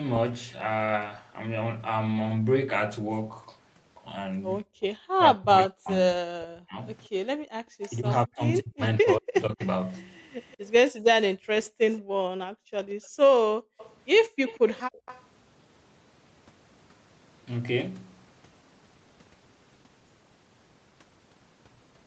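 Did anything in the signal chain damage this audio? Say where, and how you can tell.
Yes. Background gated by the echo canceller in the call processing: the room sound drops by about 40 dB at 4.64–4.81 s, 7.36–7.54 s and 10.91–15.06 s, as the canceller clamps the microphone.

Speech suppressed in double talk, likely from the same canceller: between 5.19 and 9.61 s the speech dips deeply in pieces, totalling around two seconds, when it could not separate both talkers.

Echo leak: a faint copy of the speech trails 181 ms behind at 7.81 s and through 9.62–15.22 s, likely residual loudspeaker pickup that the canceller failed to remove.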